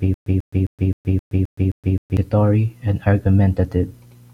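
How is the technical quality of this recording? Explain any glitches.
The first couple of seconds are broken up by a stutter with silent gaps. It's already going when the clip opens and runs to 2.17 s. A 142 ms fragment of the speech repeats seven times, each followed by about 121 ms of dead silence, so it pulses every 262 ms. That's most likely a stalled player or stream replaying its last chunk on each retry before running empty, and whatever should have played there is gone.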